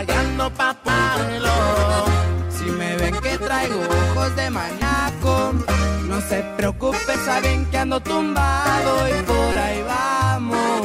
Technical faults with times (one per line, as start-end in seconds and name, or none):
0.88 damaged data in a compressed stream
4.81 damaged data in a compressed stream
7.15 damaged data in a compressed stream
9.52-9.55 damaged data in a compressed stream